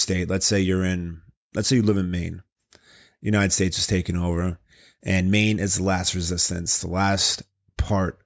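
No technical faults can be heard anywhere in this speech recording. Nothing breaks up, drops out or distorts at any point.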